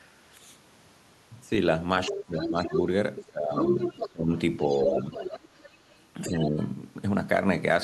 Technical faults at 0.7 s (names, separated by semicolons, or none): none